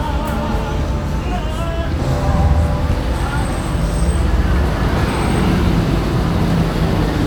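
No technical faults can be heard anywhere in this recording of sounds. Nothing in the audio points to a problem in how it was captured, processed or delivered.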